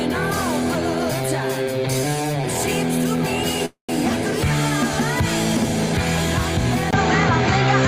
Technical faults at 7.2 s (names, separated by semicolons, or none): input switched to a poorer device